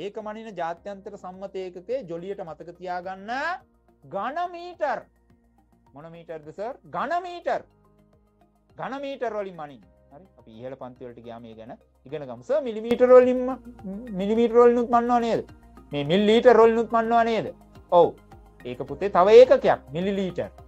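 A gain setting was likely applied without a ramp at 12.91 s, so the sudden gain jump lifts sound and background noise together by about 12 dB until the end.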